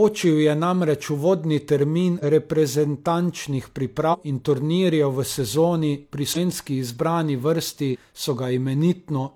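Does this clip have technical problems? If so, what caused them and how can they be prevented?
Yes. The speech jumps ahead at 2.19, 4.09, 6.32 and 7.90 s, losing about 100, 150, 200 and 100 ms. This is compressed frames skipped: whole frames, consistent with 46.4 ms frames, went missing or were rejected as damaged. Prevent it by verifying file integrity and using reliable storage or transfer.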